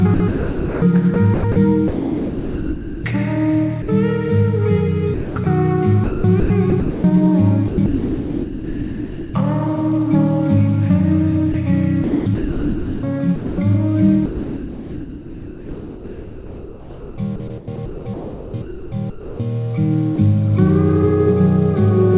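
From 0.14 to 3.04 s the sound turns choppy, with about 1.9 s of it swapped for comfort noise. The same stuttering returns at 5.14–5.46 s, 6.04–7.04 s, 7.68–9.34 s, 11.52–13.58 s and 14.26–19.40 s, where about 4.3 s of sound goes missing in patches. This is sound chopped by the voice detector: the sender likely kept toggling between transmitting and muting, and the receiver filled each muted gap with synthetic comfort noise.

Two brief gaps stand apart. At 3.82–3.88 s, 60 ms of sound gives way to steady noise. At 20.16 s, a 20 ms slice vanishes the same way. Both are sound dropped by the voice detector, likely a single misjudgement where the detector took quieter sound for background, stopped sending, and the receiver played comfort noise until transmission resumed. Throughout, the call path's G.711 A-law coding leaves nothing above 4 kHz.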